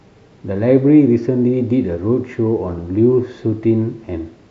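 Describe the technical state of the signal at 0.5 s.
At 0.5 s the speech signal is intact, with no audible technical fault at that moment.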